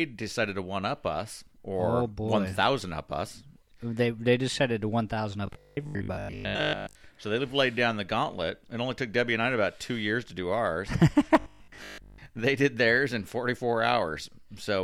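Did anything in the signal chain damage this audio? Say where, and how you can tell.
Yes, at the driver or buffer stage: robotic sound from repeated short buffers from 5.47 to 7.01 s, after "decided to one thousand", and from 11.4 to 12.26 s, between "years to do ours" and "they did theirs in". Most of the sound in both spans becomes a rigid 50 Hz buzz that still loosely tracks the speech, which fits 20 ms blocks being replayed while fresh audio is skipped, likely from buffer underruns. Mains hum at 50 Hz would run continuously, not switch on and off with these spans.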